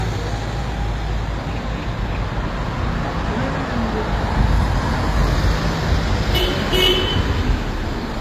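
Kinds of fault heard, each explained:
Transcoding between lossy codecs: Throughout the clip, nothing is heard above about 14.9 kHz, and two different sets of compression artefacts are layered together. The likely cause is low-bitrate HE-AAC audio re-encoded as MP3, each encoder adding its own artefacts.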